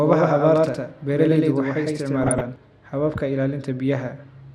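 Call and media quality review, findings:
Doubled audio track, 0.0 to 2.56 s: speech has a full-band second copy about as loud, trailing by roughly a tenth of a second, no decay or room colour, already running at the start and cutting off abruptly. Likely a second slower capture path mixed in.

DAB burbling, 2.22 to 2.41 s: short noise blips in single sub-bands over the speech. Weak DAB reception letting bit errors past error correction into the MP2 data; sounds like a run of about fifteen corrupted frames at a low error rate.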